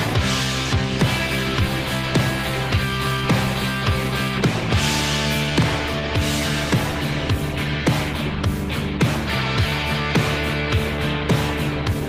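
Listening closely, nothing in the audio stood out as a technical fault at any point.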